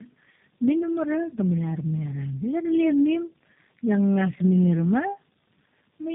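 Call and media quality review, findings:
Tandem speech coding, whole clip: rough, muffled, warbly speech, nothing above 3.5 kHz. Fits three speech codecs in series, each re-encoding the previous one's degraded output.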